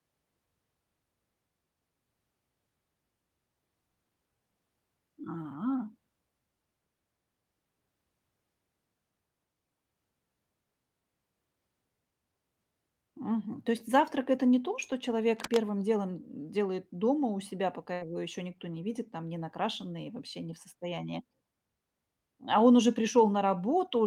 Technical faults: cable scratch noise; burst of packet loss

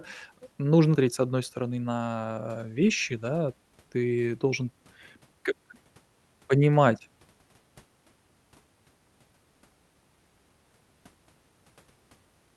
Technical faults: skip ahead; jitter buffer speed-up

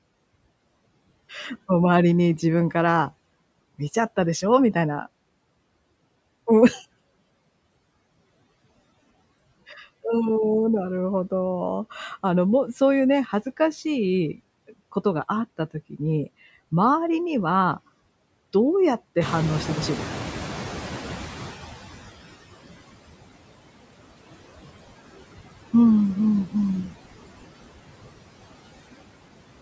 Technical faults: noise suppressor artifacts; noise suppressor catching up; speech cut by the noise suppressor

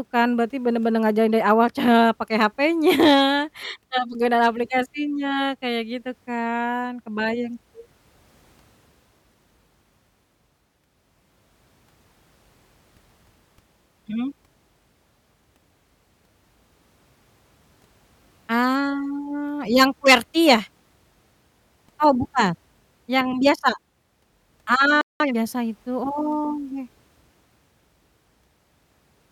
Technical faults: playback stall; time-compressed catch-up

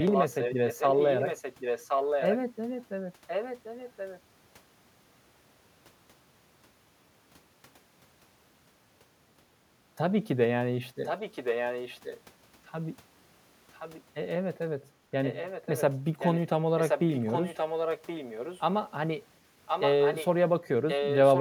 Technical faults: echo leak

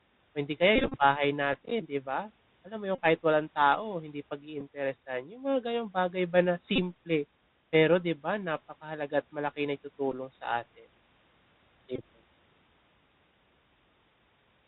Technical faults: Bluetooth CVSD headset codec; Bluetooth headset packet repeated

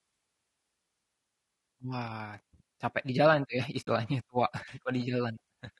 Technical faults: low-delay AAC compression; AAC frame loss with muting

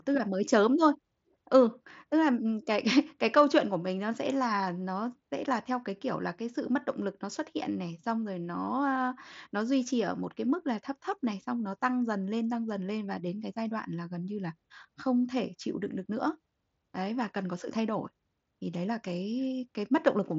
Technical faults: none

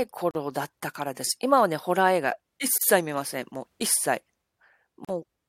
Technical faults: gap at a join of encoded pieces

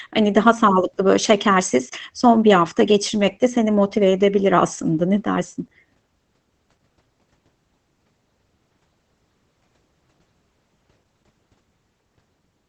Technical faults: Opus voice compression

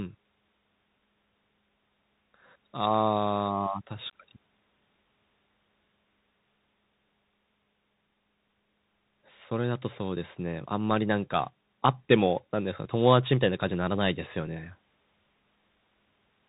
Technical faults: Bluetooth CVSD headset codec; unconcealed Bluetooth headset packet loss

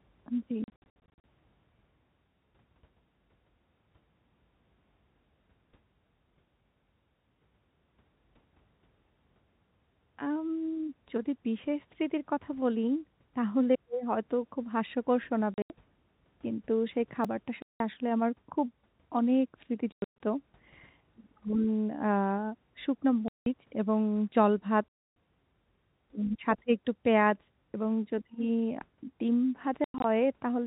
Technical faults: packet loss filled with silence; block of digital silence

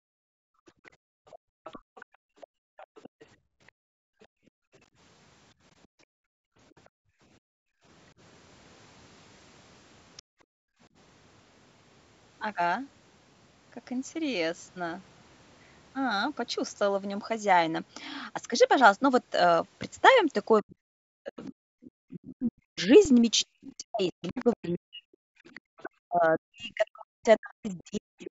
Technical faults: background gated by the echo canceller; other side's voice leaking through; speech suppressed in double talk; underrun with held sample

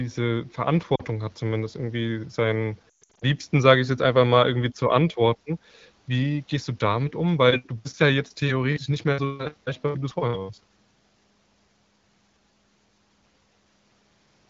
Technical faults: lost AMR speech frames

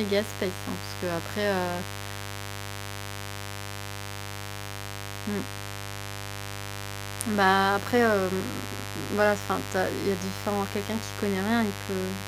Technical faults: mains buzz

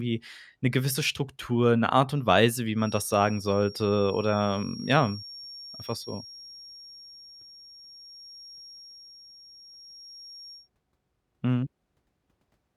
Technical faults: feedback whistle

